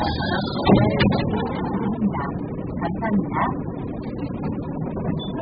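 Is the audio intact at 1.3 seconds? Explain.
No. Throughout the clip, likely AAC compression starved at around 8 kbps discards everything above 5 kHz, leaving the sound at 1.3 seconds dull and smeared.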